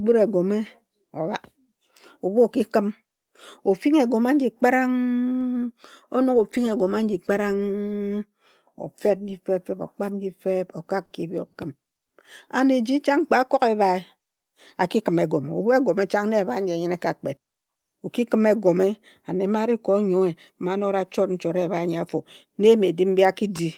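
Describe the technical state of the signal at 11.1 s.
A short stall from a late packet occurs at 11.05 to 11.12 s. A packet arrived behind schedule and the jitter buffer ran dry, so the receiver held the last bit of speech for about 50 ms until the packet turned up, then resumed from the same point. Nothing is lost, but playback now runs about 50 ms later than before. The held sound lingers unnaturally, with a faint buzzy or dipping quality at the join.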